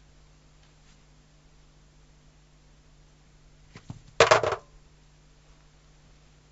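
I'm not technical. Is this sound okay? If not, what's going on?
Yes, it sounds fine.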